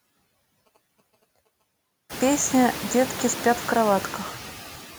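Throughout the speech, noise suppressor artifacts are audible. The suppressor pulls down every band it judges to be steady noise, cutting it by about 16 dB, and it decides this frame by frame. The background therefore drops away in the pauses and swells back under each phrase. This is most evident after the room noise rises at around 2 s. On a spectrogram the noise floor looks blotchy and gated, dark between syllables and filled in beneath them.

From 0.66 to 1.62 s, GSM signalling bursts break in: a nearby 2G phone exchanging brief groups of radio bursts with the network, which the audio circuitry rectifies into sound. The result is a galloping dit-dit-dit of short buzzes at about 217 Hz, sitting faintly beneath the speech. A spectrogram shows a comb of harmonics spaced at 217 Hz, switching on and off in clustered blocks. The waveform shows the matching bursts of regular pulses.

At 2.55 s there is a bit error spike. 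A single sample had one bit flipped, so its value jumped by a power of two and then returned at the next sample. It is heard as one sharp, isolated tick that has no connection to the speech. The waveform shows a lone vertical needle one sample wide. On the spectrogram it is a thin, full-height vertical line spanning every frequency.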